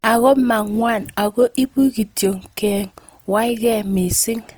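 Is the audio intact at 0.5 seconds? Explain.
No. Opus compression runs through the whole clip, including 0.5 s. The encoder appears to be in its music-style mode, which keeps each band's energy but fills starved bands with folded or noisy content, likely at around 24 kbps, so the speech sounds grainy and rough.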